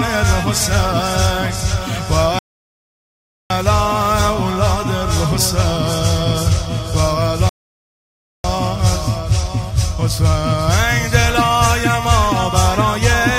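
At 2.39 s the sound stops dead for 1.11 s, then again at 7.49 s for 0.95 s: a rebuffering stall each time, the player starving for data. Unlike a dropout, playback resumes exactly where it halted, so nothing is missing; time is simply inserted.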